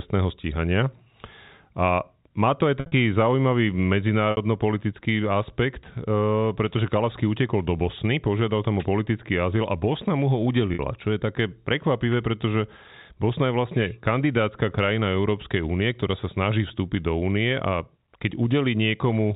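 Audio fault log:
2.80 s, 4.31 s, 10.74 s: packet loss with pitch repetition. After "má to aj", 110 ms drops out in gaps scattered over 0.12 s. At 4.31 s, 60 ms is lost. After "mu ho", 50 ms goes before "čo je také prekvapivé". The receiver repeats the last pitch period, giving a brief buzzy hold within the telephone band.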